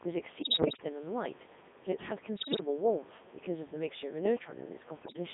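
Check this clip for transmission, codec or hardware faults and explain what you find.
Two faults stand out. The whole thing runs through a Codec 2 vocoder at 3.2 kbit/s, squeezed into roughly 200 Hz to 3.6 kHz. It rebuilds the speech from sine waves using pitch and an envelope, so it comes out buzzy and robotic.

On top of that there are bursts of bit errors on digital voice radio at 0.42–0.84 s, 2.36–2.60 s and 5.02–5.16 s. Around one bit in ten gets flipped, scrambling each frame's pitch, level and spectrum, so the speech jumps into warbles and bleepy gibberish. Faint room noise, about 24 dB down, sits underneath.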